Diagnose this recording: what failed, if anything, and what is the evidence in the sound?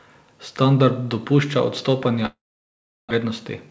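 Network stage: a long network dropout, likely from packets ceasing to arrive, runs from 2.26 to 3.25 s. The receiver stretches the last speech into a fading buzz or hiss that decays to silence. About 0.6 s of speech never returns, and playback delay shifts by roughly 0.2 s.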